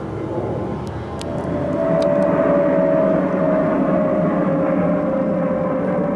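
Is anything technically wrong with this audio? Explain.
No, there's no technical fault to hear anywhere here.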